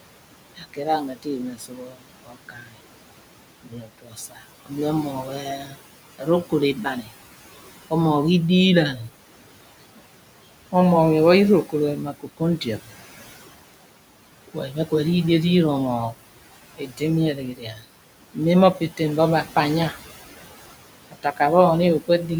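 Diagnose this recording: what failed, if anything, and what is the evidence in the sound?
Call processing is the culprit. The noise suppressor artifacts run throughout: the room noise is pulled down about 17 dB between phrases and rises back up under the words.

The same suppressor causes speech cut by the noise suppressor, mistaking quiet speech for noise at 0.56–2.79, 3.62–4.72, 5.28–7.12, 11.64–12.89, 14.48–14.92, 16.76–19.95 and 21.11–21.4 s. Those bits drop by up to about 19 dB and sound swallowed.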